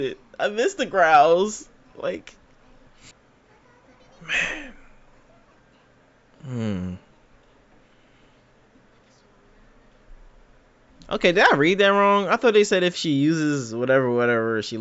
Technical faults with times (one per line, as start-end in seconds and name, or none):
none